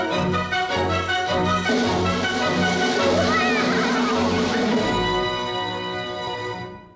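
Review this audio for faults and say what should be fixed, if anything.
No faults turn up in this audio, so nothing needs to be fixed.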